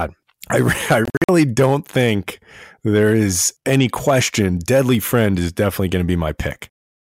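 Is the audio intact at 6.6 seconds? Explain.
Yes, at 6.6 seconds the audio is intact, with no dropout, click, distortion or other fault at that moment.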